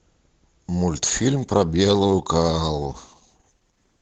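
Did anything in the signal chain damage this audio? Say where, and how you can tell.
Yes, at the network and codec stage: the adaptive stream dropped to a lower bitrate at 0.90 s and stays there to the end of the speech. The change is abrupt with no gap. Codec smearing rises, consistent with a switch from around 64 kbit/s Opus down to about 16 kbit/s. The waveform runs on unbroken through the switch at 0.90 s.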